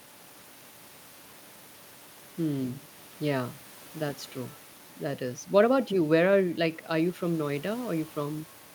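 No technical faults can be heard anywhere in this speech recording.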